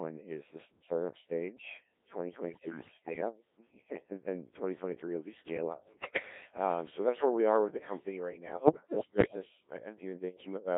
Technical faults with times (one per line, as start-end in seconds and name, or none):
0.00-10.77 Codec 2 vocoder
2.49-3.21 bit errors on digital voice radio
5.84-6.22 bit errors on digital voice radio
8.52-9.36 bit errors on digital voice radio